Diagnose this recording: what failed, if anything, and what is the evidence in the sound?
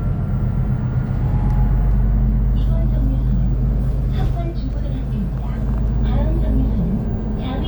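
Nothing failed: no stage in the chain leaves an audible mark anywhere in the recording.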